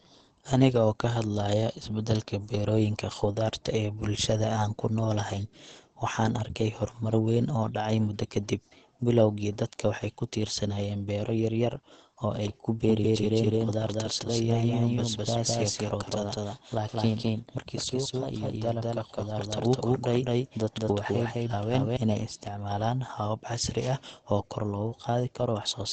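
Throughout, the speech sounds muffled and hoarse, with nothing above about 8.6 kHz. This points to Opus compression, likely in its SILK speech mode at a low rate near 16 kbps. The band is cut, and the damage is plainly audible.

From 12.85 s, just after "yaryar oo ay ku", to 21.97 s, a doubled audio track appears. A second full-band copy trails by about a fifth of a second at roughly equal level. It starts and stops abruptly and ends just before "inay isticmaalaan habab casri". Likely a second capture path.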